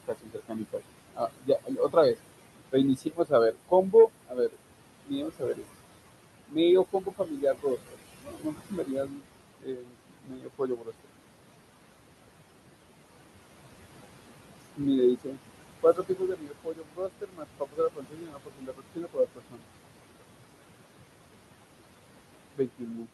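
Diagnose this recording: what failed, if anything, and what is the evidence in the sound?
The call-processing noise suppressor is pulling the room noise, which sits about 11 dB below the speech, down by about 21 dB frame by frame. That leaves noise suppressor artifacts throughout: the background sinks in pauses and swells under speech.

The same call-processing stage also misreads parts of the speech as noise. This speech cut by the noise suppressor appears at 0.0–2.16 s, 2.69–5.65 s, 6.47–11.11 s, 14.57–19.67 s and 22.54–23.1 s. Within those spans, quieter syllables and word endings are turned down by as much as about 22 dB, so they sound swallowed and faint.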